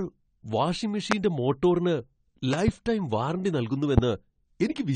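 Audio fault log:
Throughout: AAC compression. Nothing reaches above 9 kHz and the codec damage is plainly audible, so the speech sounds dull and smeared. This likely comes from AAC-LC quantising its spectrum hard at a low bitrate, which fits something around 32 kbps.
1.12–1.14 s, 2.53–2.71 s (two pops), 3.98–4.00 s: loud pop. Each is a sharp burst about 20 dB above the speech, which carries on underneath. The likely cause is a sudden voltage step or pulse from a plug, a switch, static or a driver glitch.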